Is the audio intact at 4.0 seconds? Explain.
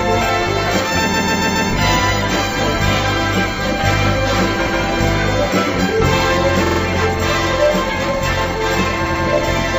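Yes, at 4.0 seconds the audio plays through cleanly, with no dropout, click, distortion or other fault at that moment.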